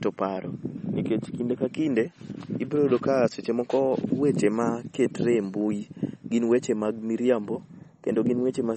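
MP3 compression, likely the cause of the damage heard from start to finish, leaves nothing above 8.4 kHz, so the speech loses its top end and sibilants turn dull. The damage is plainly audible, and it fits a starved encoder running near 32 kbps. With so few bits, the encoder discards the treble at a fixed frequency and drops quieter frequency lines that flicker between frames, giving the audio a watery, swirling texture.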